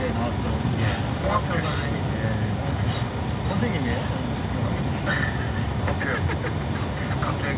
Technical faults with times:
none

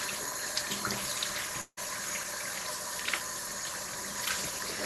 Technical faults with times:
1.61-1.79 long network dropout

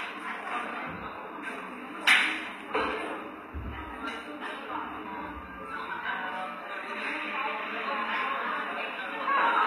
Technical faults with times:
0.00-9.66 HE-AAC compression

